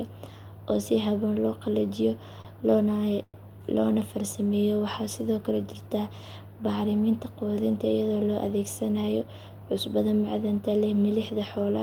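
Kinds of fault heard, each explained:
Short stall from a late packet: Around 2.41 to 2.48 s a packet arrived late and the receiver's jitter buffer ran dry, so the last bit of speech was stretched for 33 ms until it caught up. No speech is lost, but a sound lingers slightly too long with a slight buzz or dip. On a spectrogram the harmonics run flat and unchanging for that span. The waveform shows the same cycle repeated before normal variation resumes.
Call audio freeze: From about 3.23 to 3.37 s the speech halts and 110 ms of filler is inserted. The held sound continues as a buzz or hiss, fades, and drops to 40 ms of silence before the speech picks up exactly where it stopped, with nothing missing. This is likely packets held up in transit emptying the jitter buffer. A spectrogram shows frozen, decaying bands ending in a blank gap. The waveform tapers to a flat line.
Jitter buffer speed-up: Between roughly 9.02 and 9.98 s the receiver trims its surplus buffered audio by repeatedly cutting out short pitch-period slices, removing about a tenth of a second in total. 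The speech plays about 10% faster at unchanged pitch and sounds hurried. On a spectrogram, syllables and formant movements look compressed in time while harmonic spacing stays the same. The waveform shows shortened segments with small seams where the pieces were removed.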